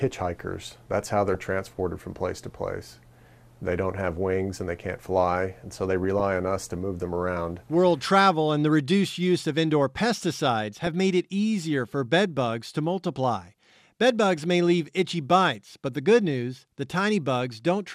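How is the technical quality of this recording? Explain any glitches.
The recording is marred by four short bursts of DAB burbling, at 1.27 to 1.35 s, 6.04 to 6.21 s, 10.73 to 10.87 s and 14.38 to 14.43 s. Each time, weak reception lets a small fraction of a percent of bits slip past error correction into the MP2 stream, corrupting samples, which put short blips of noise into single sub-bands. The result is brief burbling laid over the sound. Unlike a dropout or concealment mute, the programme never stops.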